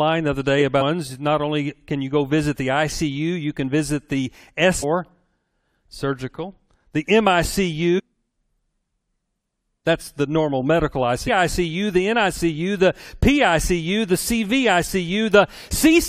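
Damaged data in a compressed stream breaks the audio four times: at 0.80 to 0.82 s, at 4.82 s, at 7.98 to 8.00 s, and at 11.27 to 11.29 s. Each break lasts about 20 ms. At these points the compressed frames were corrupted. The decoder could not read them correctly and lost its place. It then had to hunt for the next valid frame header. Each event sounds like a short chirp or blip cutting through the sound.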